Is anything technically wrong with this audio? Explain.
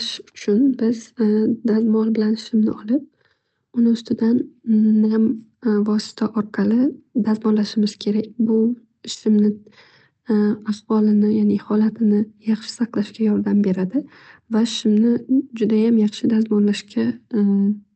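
No, nothing is wrong technically: the speech comes through a call codec path whose top end stops at about 8 kHz, which is ordinary band-limiting for that path, and no dropouts, clicks, distortion or timing problems are audible anywhere.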